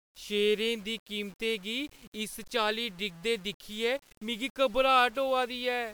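Throughout the speech, quiet passages turn gritty and the softest tails sputter or drop out, the likely result of low bit depth without dither, about 7 bits rounded. Unlike steady hiss, this distortion tracks the signal, sitting roughly 30 dB down and vanishing in silence.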